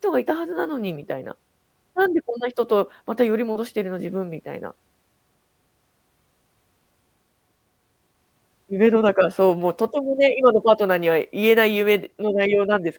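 At 3.51 to 3.57 s there's a short concealed packet loss: about 40 ms of audio arrived too late, and the decoder patched the gap by extending what came before, leaving a brief smear.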